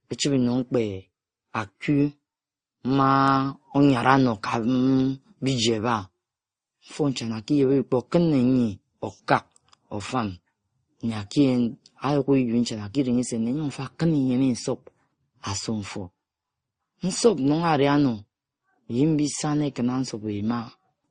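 Speech runs through the whole clip with transcoding between lossy codecs, likely an MP3 stage near 39 kbit/s followed by Opus around 32 kbit/s. Nothing sounds above 9.7 kHz, so sibilants lose their edge, while the artefacts of the first codec are re-encoded and joined by the second codec's own artefacts. A spectrogram would show a hard ceiling at 9.7 kHz throughout.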